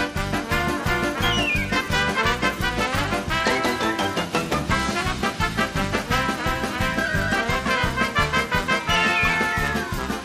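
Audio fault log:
No faults detected.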